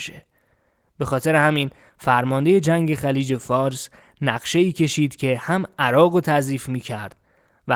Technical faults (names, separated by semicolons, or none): none